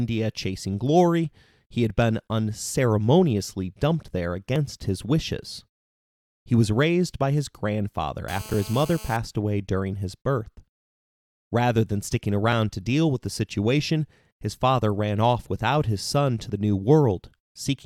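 Overlap between stream segments at 4.56 s, just after "been unceremoniously dumped there" and before "his wishes", leaves a tiny skip as a sliver of audio is trimmed away and the waveform jumps.

GSM phone buzz from 8.28 to 9.17 s, between "raised by his grandfather" and "away during his birth": a nearby phone on a call pulses at 217 Hz, and the rectified bursts produce a steady, raspy, harmonic-rich buzz at about 18 dB below the speech.

The same segment overlap recurs at 12.52 s and at 16.50 s after "without his son to", skipping at roughly four-second spacing, which fits 4-second stream segments.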